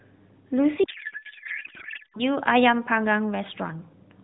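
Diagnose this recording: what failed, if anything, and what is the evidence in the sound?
Codec stage: a codec payload misread. From 0.84 to 2.22 s the speech turns into garbled warble that barely tracks it. This fits octet-aligned AMR unpacked as bandwidth-efficient.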